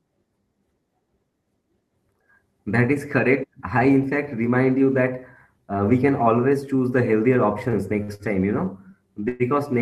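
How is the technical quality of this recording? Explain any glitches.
The recording has two network glitches near the end.

From 7.33 to 8.22 s, after "can always choose the", there are repeated stalls (stutter). Packets arrived too slowly, so the buffer ran dry four times. The receiver stretched the last sound to fill about 141 ms, with the longest gap 58 ms. Nothing is lost. The speech drags and stutters until "time you know".

At 9.28 to 9.43 s, just after "time you know", there is a call audio freeze. The speech halts and the last sound is continued as a fading buzz or hiss for about 113 ms. It then resumes where it stopped, with nothing missing. The likely cause is packets held up in transit, emptying the jitter buffer.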